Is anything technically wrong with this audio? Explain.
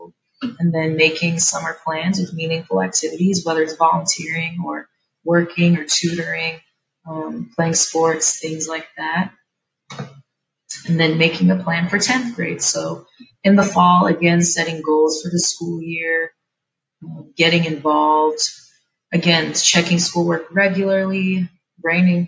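Yes. Between 13.14 and 13.44 s the sound is cut by the noise suppressor. The call's suppressor judged part of the sound to be background noise and pulled its gain down, by about 13 dB at the deepest point. Roughly a fifth of a second is affected in total. You hear the level sag, as if the sound briefly dips away, and any tail fades out early rather than decaying naturally.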